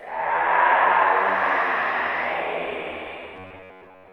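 Robotic sound from repeated short buffers, 3.34 s to the end: audio likely arrived too seldom, so roughly 10.7 ms chunks repeat for most of the stretch, imposing a rigid, metallic 93.8 Hz buzz.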